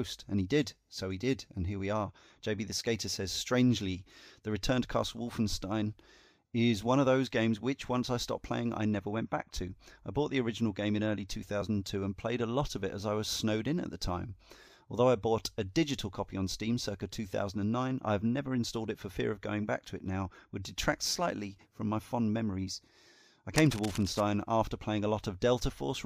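At 11.61 s, compressed frames were skipped: a couple of frames never reached the output, either missing from the stream or rejected by the decoder as damaged, so the speech jumps ahead by roughly 30 ms.

From 23.56 to 24.21 s there is cable scratch noise, likely from a worn cable, connector or control being moved so that its contact resistance fluctuated rapidly. Dense, irregular bursts of scratching and rustling sit over the speech, roughly 10 dB below it.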